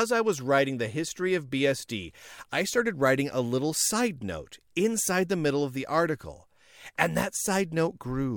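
A recording of speech, with no technical fault to be heard anywhere in it. Nothing in the audio calls for a time, a value or a cause.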